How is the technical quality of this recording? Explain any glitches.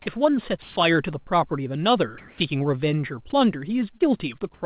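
The recording has four audible glitches, all typical of a voice call. The audio stops sharply at 4 kHz throughout, which points to a narrowband telephone codec such as G.711.

From 0.62 to 0.76 s, sound is dropped by the voice detector. The sender's detector likely mistook quiet speech for background and stopped transmitting, so about 90 ms of speech vanishes under steady noise. On a spectrogram the speech harmonics stop abruptly, leaving a flat, even wash.

Comfort noise replaces the background at 2.18–2.40 s and again at 4.54–4.62 s. During pauses the sender likely stopped sending audio, and the receiver filled the gap with synthetic noise. It sounds smooth and featureless, about 2 dB quieter in the first gap and about 7 dB quieter in the second. A spectrogram shows uniform texture with a level step.

Between 3.98 and 4.02 s there is a short concealed packet loss. About 20 ms of audio arrived too late, so the receiver extended the preceding sound to cover the gap. 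It is heard as a brief smear, and appears as a stretched, repeated patch on the waveform.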